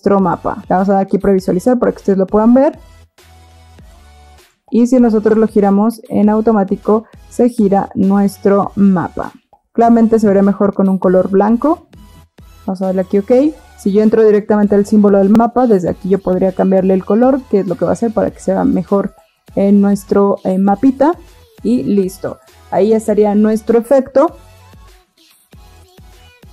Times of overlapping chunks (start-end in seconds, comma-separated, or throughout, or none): 5.31-5.35, 15.35-15.40, 25.40-25.45